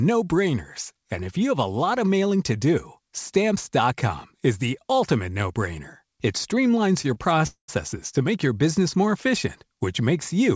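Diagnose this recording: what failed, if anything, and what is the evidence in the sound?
Short stalls from late packets at 7.02 s and 7.14 s, each about 20 ms: at the network and jitter buffer stage, the buffer ran dry, so the receiver held the last sound a little too long before resuming from the same point, with nothing lost.

A call audio freeze from 7.47 s to 7.70 s: the speech holds as a fading buzz that drops to silence for about 110 ms, then continues where it stopped. The likely cause is packets delayed in transit, which emptied the jitter buffer and left a 211 ms gap in the audio.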